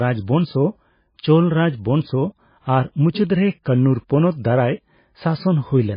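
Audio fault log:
throughout, MP3 compression: watery, swirly sound with nothing above 5 kHz and smeared attacks, likely from heavy MP3 encoding at a very low bitrate, near 17 kbps.
3.63–3.66 s, pre-echo: a 28 ms hiss precedes a soft, smeared attack after "ᱟᱨ ᱢᱩᱪᱟᱹᱫ ᱨᱮ", as coding noise spread across the block fills the quiet before the onset.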